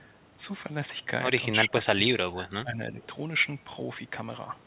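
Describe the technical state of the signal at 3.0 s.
At 3.0 s, speech suppressed in double talk is just ending (1.52–3.0 s). Level dips by up to about 25 dB, likely from the echo canceller ducking the talker while the other side spoke. Unlike a packet dropout, the talker's voice is turned down rather than lost to a gap in the stream.

An echo leak follows immediately (3.01–3.06 s). A faint copy about 30 dB down arrives 320 ms late, likely from residual loudspeaker pickup. It is a distinct delayed repeat, not a smooth reverberant tail.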